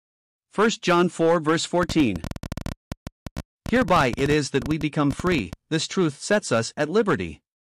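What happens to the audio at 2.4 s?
At 2.4 s the speech sits inside a train of clicks running from 1.83 to 5.54 s, starting just before "this truth sets". About fifty similar pulses arrive unevenly at roughly 13 per second, peaking about 10 dB above the signal, likely from electrical interference or a faulty connection or power supply.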